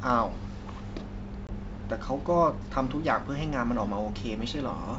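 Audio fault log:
1.47–1.55 s: packet loss on an ADPCM call. About 20 ms of audio drops out, likely a couple of packets, and is filled with silence. The hole has abrupt edges. The G.722 decoder's adaptive predictor and step size then no longer match the sender's, so the sound resumes slightly distorted. It settles within some tens of milliseconds as the decoder's state catches up. The surrounding wideband coding at 64 kbit/s stays clear.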